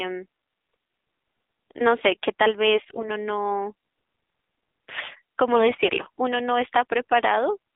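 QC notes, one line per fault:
Throughout: AMR narrowband mobile codec. The AMR-NB coder at about 7.4 kbps, in a line band of roughly 250 Hz to 3.6 kHz, plainly narrows the speech and gives it a buzzy, synthetic edge.
2.75–3.11 s and 5.52–5.97 s: AMR bit errors. Flipped low-priority bits, heavier in the first burst at around 5 percent than in the second at around 2, misplace excitation pulses, so speech keeps pitch but turns hoarse and gargly.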